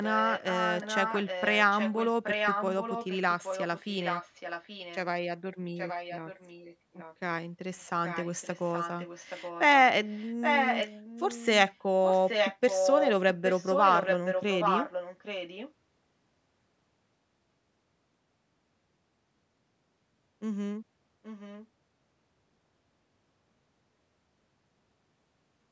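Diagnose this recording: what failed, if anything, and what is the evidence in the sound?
Echo leak at the call-processing stage: a discrete copy of the speech trails by 825 ms at 0.03–4.97, 5.76–7.15, 7.78–9.67, 10.05–13.12, 13.45–15.73 and 21.23–21.67 s. It is sometimes nearly as loud as the original and faint near 21 s. The likely cause is a far-end loudspeaker's echo canceller failing to remove its microphone pickup. A single fixed-delay repeat distinguishes it from room reverberation's smooth decaying tail.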